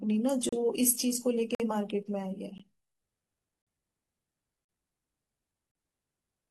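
The stream's segment time stamps fail to line up at each boundary, leaving a gap between stream segments that the player fills with silence, roughly once per second, which fits 1-second segments. In this speech the result is a hard-edged dropout at 0.49–0.53 s, 1.55–1.60 s, 2.58 s, 3.62–3.67 s, 4.65–4.69 s and 5.71–5.75 s, each lasting about 16 to 50 ms. The sound stops abruptly and resumes with nothing missing.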